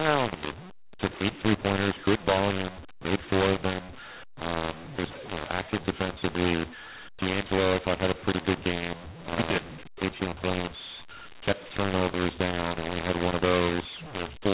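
Throughout, mu-law and A-law are mixed up: mu-law samples decoded as A-law scramble levels, so speech turns harsh and pauses fill with noise, unlike clipping.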